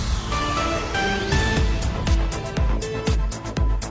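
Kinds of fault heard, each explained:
No faults turned up here, so there's nothing to list.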